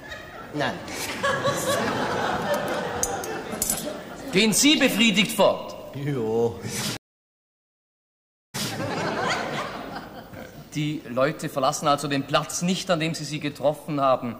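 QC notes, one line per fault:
6.97–8.73 s, stream reconnect: the connection broke, leaving the player silent for 1.57 s while it reconnected and restarted its decoder mid-stream. The server resent a short burst, so playback resumes 0.19 s earlier than where it cut, repeating that fragment.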